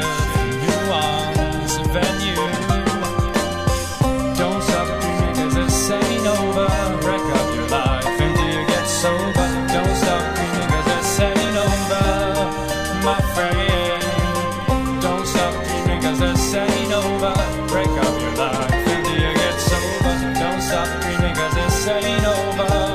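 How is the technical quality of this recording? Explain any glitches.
No technical faults can be heard anywhere in the recording. There are no glitches to explain.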